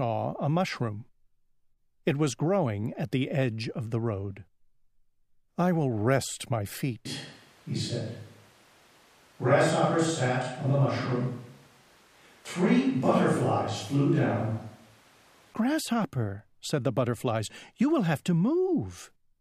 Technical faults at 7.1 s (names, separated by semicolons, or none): switch to a distant microphone